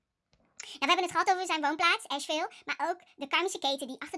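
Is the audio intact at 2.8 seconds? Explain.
No. At 2.8 seconds the speech is affected by a wrong sample rate fault that runs from 0.63 s to the end. Audio captured at 16 kHz is played back at 24 kHz without conversion, so everything runs 1.5 times fast and sits about 7 semitones high, sounding hurried and chipmunk-like. Unlike a pitch shift or time-stretch, speed and pitch move together by the same ratio, with no warbling or smearing from processing.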